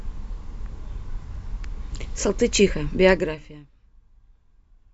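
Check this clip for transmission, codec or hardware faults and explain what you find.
One fault stands out in this speech clip: zipper noise from 3.11 to 3.71 s. As the speech drops by roughly 25 dB over that stretch, a fast ticking, zipping texture rides on top of it, at something like 40 clicks a second. The gain is being moved in coarse 1 dB steps with no smoothing between them, so each jump is a small discontinuity in the waveform and clicks.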